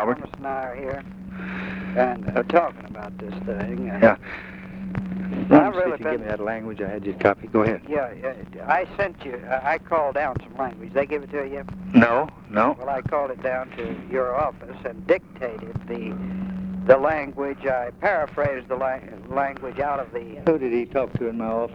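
No technical faults can be heard anywhere in this recording.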